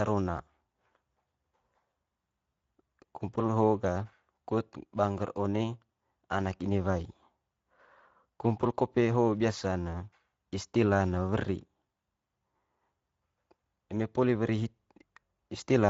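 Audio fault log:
Throughout: Speex codec damage, plainly audible. Speech sounds hoarse and noisy, which fits a rate near 17 kbps leaving the CELP excitation short of detail.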